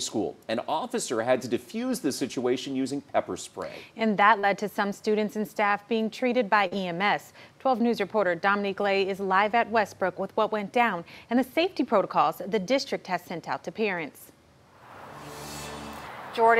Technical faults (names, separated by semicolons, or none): short concealed packet loss